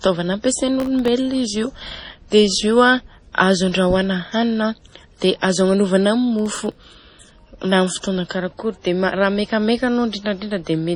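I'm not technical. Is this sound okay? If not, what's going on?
No, it isn't quite okay. There are three separate problems.

The whole clip has a dull, watery, swirly quality, and nothing above about 10.4 kHz survives, so the crisp top end is gone. That's most likely heavy MP3 compression. When the file is squeezed hard, the encoder saves space by cutting off the treble and dropping quieter details. Those details flicker in and out from moment to moment, which is where the swirl comes from.

Twice you'll hear a burst of crackle or gritty tearing on top of the speech, from 0.80 to 1.08 s and again from 6.39 to 6.84 s, right after "hanina dia azo agnanovana". This is processor overload crackle. The computer was too busy to deliver its very tiny chunks of sound on time, each well under a millisecond. Around ten in a row came out as silence, and that quick string of dropouts sounds like crackle.

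Three sharp starts of sounds get a short hiss just before them and land a bit soft. This happens at 2.30 s before "izy io a azo", from 5.18 to 5.22 s before "dia azo agnanovana", and at 8.29 s. That's pre-echo. The compression spreads its noise across a short block of time, so the noise meant for the loud attack leaks into the quiet moment before it.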